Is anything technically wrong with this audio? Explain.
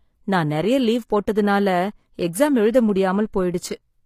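Yes, two problems can be heard in this speech clip.

Throughout, the sound shows plainly audible codec damage, with nothing above 14.9 kHz, most likely from HE-AAC compression at a low bitrate, around 24 kbps. That codec stores only the lower spectrum and rebuilds the treble by copying lower bands upward under a coarse envelope, so harmonics above the crossover don't line up with the real ones. On a spectrogram the top band ends at a hard ceiling of 14.9 kHz, and the upper region looks like a smeared copy of the bands below.

From 0.86 s, just after "நான் நிறைய", to 3.91 s there are clock drift buffer slips: about four clicks or pops, spaced 1.01 s apart. Two devices running on separate clocks that disagree by roughly 200 parts per million let the buffer between them fill or drain until a block of around 7 samples is dropped or repeated, which is the likely cause. On the waveform, each slip appears as a small discontinuity recurring about once a second.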